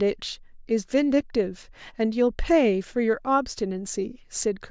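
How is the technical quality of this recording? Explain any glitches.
The technical quality of this recording is good, with no glitches to explain.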